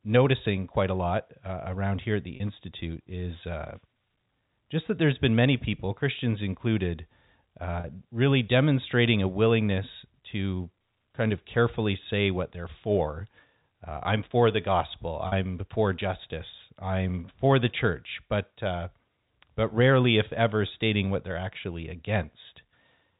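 Speech with packet loss with pitch repetition at 2.36–2.40, 7.80–7.84, 15.28–15.32 and 20.68–20.70 s: each 40 ms gap (20 ms at the last) is filled with a briefly held, buzzy repeat of the voice rather than a silent dropout, over a telephone-band G.711 line.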